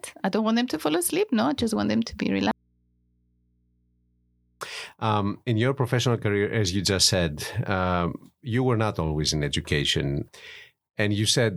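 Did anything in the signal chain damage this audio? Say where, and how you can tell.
Yes. From 2.51 s to 4.61 s the speech cuts out abruptly for about 2.1 s, leaving only mains hum far below normal level. This is an audio dropout to a faint residue, likely from an analogue wiring or connector break that left the input open while the downstream path stayed live.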